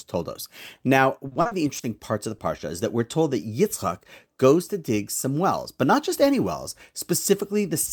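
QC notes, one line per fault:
1.27–2.02 s, repeated packet loss (robotic sound): eight dropouts in quick succession, the longest 40 ms. Each is bridged by extending the preceding audio, so about 28% of this stretch is synthetic fill. The sound turns choppy and robotic, with fragments missing.
2.38–2.42 s, short concealed packet loss: a single 20 ms hole that the receiver covered by continuing the last sound, then crossfaded back into the real signal. It is heard as a brief smear or wobble.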